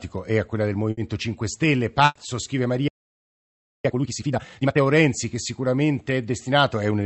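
It's a speech clip carried over a call link, and you can hear that path in the coding: the top end stops around 8 kHz, which fits an Opus wideband setting at a moderate bitrate. The first fault is a burst of packet loss at 0.91 to 0.99 s. The receiver concealed about 60 ms by continuing the last bit of sound and fading it out, then jumped ahead past the missing 60 ms. A second, longer burst of packet loss hits at 2.05 to 2.17 s. This time about 100 ms is papered over, with a brief 10 ms dropout to silence, and another 100 ms chunk of the speech simply isn't there when it picks up again. Then at 2.88 s the audio cuts out dead mid-flow and stays silent until 3.85 s, just under a second. That's a playback stall, likely the player running dry or its thread getting blocked. Right after it, from 3.85 to 4.81 s, you get time-compressed catch-up: the speech rushes along at roughly double speed while keeping its normal pitch. 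The player does this by cutting out small pieces and cross-fading them as it burns through its backlog.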